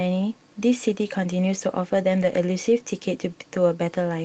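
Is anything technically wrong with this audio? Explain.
Yes. From 2.17 to 2.35 s there is a lost packet rebuilt from error correction. Roughly 100 ms of audio, which fits about five lost packets, was replaced by the low-bitrate copies carried in the following packets, so the sound turns briefly rough and noisy without any gap. That lack of a gap distinguishes it from a dropout or a smeared, buzzy concealment tail. The surrounding audio carries the ordinary coding texture of an Opus call path at 32 kbps with 8 kHz bandwidth.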